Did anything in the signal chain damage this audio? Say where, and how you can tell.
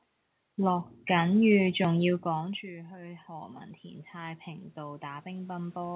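Yes. The damage is automatic gain rising in the call processing stage. Around 2 s the talker moved away and the input fell by about 21 dB. From 2.24 s to the end, the AGC slowly raises its gain to compensate. You can tell it isn't just the talker coming back because the room noise swells together with the voice. A change in talker position alters only the voice, while a gain ramp lifts everything in the pickup at once.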